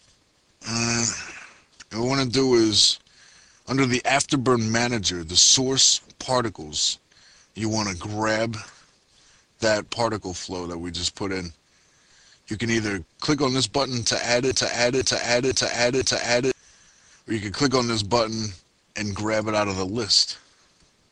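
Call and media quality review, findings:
Broken-record loop, 14.51–16.51 s: one 0.5 s fragment repeats exactly four times, back to back. Likely a stalled player or stream resending its last fragment; the 2 s of audio due there is lost. Identical repeats without decay, unlike echo.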